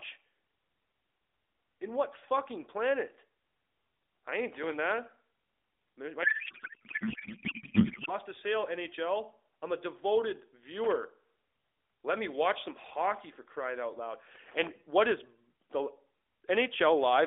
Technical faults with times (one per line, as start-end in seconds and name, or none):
4.52-4.73 loose connector crackle
6.24-8.13 codec payload misread
14.35-14.69 loose connector crackle